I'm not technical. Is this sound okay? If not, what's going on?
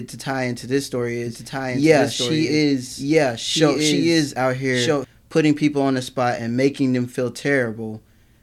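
No. From 1.26 to 5.05 s there's a doubled audio track: the same speech plays twice, the copy about as loud and roughly a second and a half behind. Unlike an echo, it never fades or sounds roomy, and it starts and stops abruptly, likely from two out-of-step copies.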